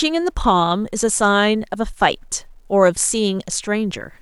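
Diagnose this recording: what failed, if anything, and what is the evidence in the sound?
The sample-format conversion has likely truncated the speech without dither, to a word length consistent with about 10 bits. Throughout, a grainy low bit depth distortion follows the speech at roughly 50 dB below it. Quiet passages turn gritty, and the softest tails sputter or drop to silence.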